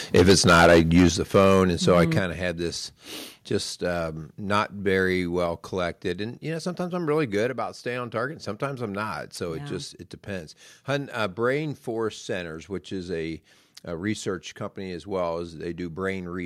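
Microphone overload from 0.14 to 1.08 s: the speech peaks run about 12 dB past the converter's ceiling, flattening roughly a sixth of the waveform into a harsh crackle. The likely cause is an input volume set far too high.

Microphone volume stepped down at 0.17 s (about 2 dB) and 1.17 s (about 7 dB): level and background drop abruptly, each step likely the call software cutting input volume after detecting clipping.

Microphone overload again from 1.35 to 2.04 s, milder at about 3 dB over, with a small fraction of peaks squared off. The gain is likely still set too hot.

Microphone volume stepped down at 2.19 s (about 6 dB), then at 5.46 and 7.5 s (about 2 dB each), sudden level drops likely from further automatic gain reductions.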